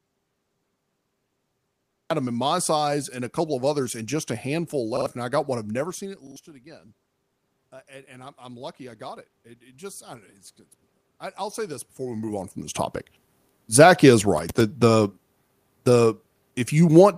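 An audio dropout to silence is already under way when the clip begins and lasts until 2.1 s. Until then there is digital silence with no room tone at all, so the input was likely disconnected or muted while the recorder kept writing zeros.

Repeated buffers occur at 4.97 s and 6.27 s, where a roughly 46 ms chunk plays twice more each time, and at 11.15 s, where it repeats once. Each repeat is a hard-edged stutter, consistent with a 2048-sample buffer being replayed when new audio arrived late, and about a tenth of a second of fresh sound is lost at the first two.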